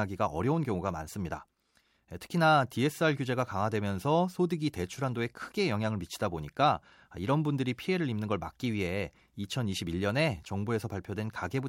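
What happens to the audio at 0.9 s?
Nothing goes wrong at 0.9 s; the speech carries on intact through that moment with no dropout, click, distortion or other fault.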